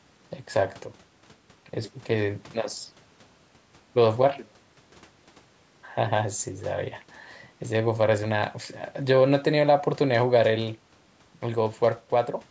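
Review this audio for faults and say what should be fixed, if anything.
Nothing here needs fixing; the speech has simply been through a call's microphone processing, which trims the lowest bass and leaves nothing above 8 kHz, and that's just how such a path normally sounds.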